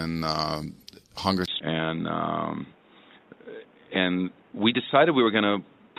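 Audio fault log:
1.46 to 5.99 s, input switched to a poorer device: after a 20 ms silence the sound turns dull and boxy, with nothing above 3.8 kHz, a level about 5 dB lower and a new noise floor about 30 dB down, likely from a change to another microphone or headset profile. A spectrogram shows the top band cut off flat and a new noise floor.
1.59 s, skip ahead: playback jumps forward with no gap filled, losing roughly a second of audio. The waveform joins two segments directly, and the spectrogram shows an abrupt change with no silence between them.
3.39 to 5.42 s, jitter buffer speed-up: the audio runs at 113% speed, about 300 ms in total trimmed out as short pitch-period pieces to cut excess buffer delay, so it sounds hurried at unchanged pitch. Harmonic spacing stays put while syllable spacing on the spectrogram is compressed.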